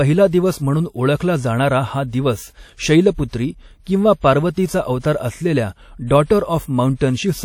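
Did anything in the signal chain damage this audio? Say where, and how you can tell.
Yes. Throughout the speech, the codec stage has left a ringing, washy texture with a hiss that swells and fades with the signal, and nothing is present above 18.9 kHz. This is likely WMA compression at a low rate, which fits roughly 48 kbps. Long transform blocks smear quantisation noise across tens of milliseconds, and the encoder zeroes weak spectral lines.

Pre-echo occurs from 6.95 to 7.01 s, where a short hiss leads a sharp onset by about 59 ms and the attack sounds blurred. This is also a codec-stage fault. The attack falls late in a transform block, so noise scaled for the loud onset spreads evenly across the whole block and fills the quiet moment just before it.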